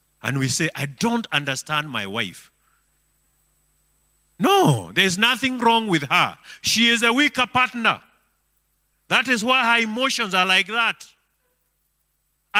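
Clock drift between sender and receiver runs through the whole speech clip. The sender's clock runs about 3 percent slow against the receiver's. The jitter buffer keeps draining as a result. Small timing hiccups recur at uneven intervals from start to finish.

Repeated timing corrections follow from 0.46 s to 12.38 s. The receiver keeps repeating short pieces to fill the gaps. Each edit is tiny. Together they slow the speech to 98 percent and add roughly a third of a second.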